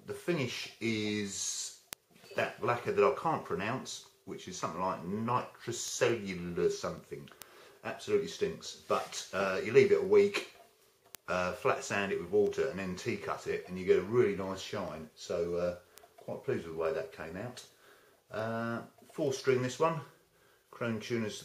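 Sharp ticks of uneven strength run at a steady rate of about five per second from 0.17 s to 21.25 s, some hundred in all. These are word clock ticks: the receiving device's free-running clock is off by roughly 100 ppm, so a sample is dropped or repeated at each slip.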